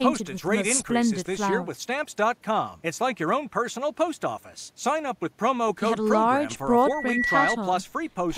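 Speech, with loudspeaker feedback squeal from 6.72 to 7.58 s. A steady 1.9 kHz tone swells over about half a second until it stands a few decibels above the voice. The microphone is picking up its own loudspeaker, and the loop gain exceeds one at that frequency.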